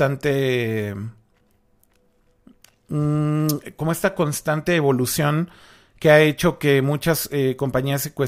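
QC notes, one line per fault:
No technical faults can be heard anywhere in the speech signal, with level, continuity and timing holding steady throughout.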